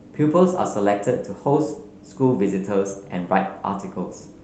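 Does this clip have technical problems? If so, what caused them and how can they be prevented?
No, this speech clip has no technical problems to fix. It has passed through a call path using the Opus codec, and the top end stops at about 8 kHz, which fits a wideband call setting around 32 kbps.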